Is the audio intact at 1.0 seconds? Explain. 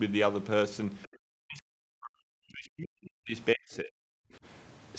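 No. From 1.03 to 1.08 s, a faint scrap of the other side's voice leaks through, far below the speech, likely echo the canceller failed to remove.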